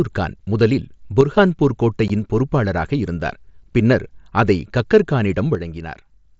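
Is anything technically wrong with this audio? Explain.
Yes, there are two kinds of fault in this speech clip.

One channel drops out twice: from 1.21 to 1.36 s, and again from 5.55 s to the end. In both stretches the speech suddenly sounds about 6 dB quieter, with the level stepping down rather than fading, and coming back up after the first. The likely cause is that one side of a stereo signal went silent before being folded to mono. Whatever both channels shared then loses half its contribution, and anything carried only by the missing side vanishes.

Unconcealed Bluetooth headset packet loss appears at 2.08 s as a brief hole of about 15 ms with hard edges. The gap fits two consecutive headset voice frames never arriving. Nothing filled them with a plausible guess, so silence or an idle pattern took their place and the waveform jumps abruptly at both boundaries. The speech reaches the listener through the mSBC wideband headset codec, which caps it at 8 kHz and adds a faint graininess.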